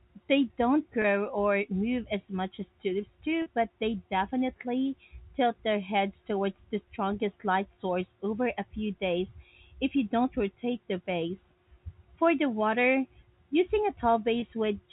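Packet loss with pitch repetition hits at 1.02–1.04 s (just before "or move as much"), 3.42–3.46 s (after "as much as tulips") and 14.40–14.42 s (after "the water using a"). In each gap, 20 or 40 ms of lost audio, the receiver loops the last pitch period, giving a brief buzzy hold over the narrowband G.711 telephone coding.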